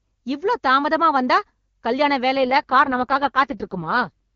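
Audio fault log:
2.36–4.11 s, AMR rate drop: the speech turns rough and synthetic for this stretch, pointing to the codec stepping down from 23.85 to 6.6 kbit/s. Unlike a dropout or a band change, there is no gap and the bandwidth holds steady; only the texture degrades, with the clear HD Voice quality of the opening.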